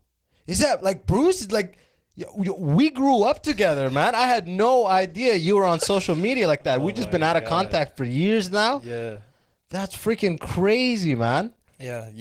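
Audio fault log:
throughout Opus voice compression: speech sounds hoarse and faintly robotic, with coarse linear-prediction coding below 8 kHz and a thin transform layer above, which fits a hybrid stream near 16 kbps. A spectrogram shows smeared harmonics and patchy energy above 8 kHz.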